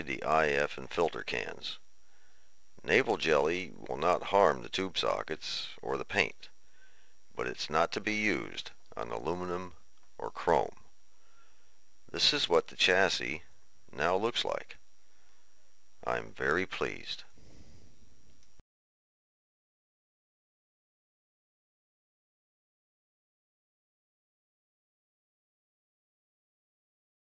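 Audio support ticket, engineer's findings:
Resampler restarted on every block: 100 Hz buzz under the signal the whole way through. Each 10 ms block resampled cold, 44.1 to 16 kHz, so every block edge ticks.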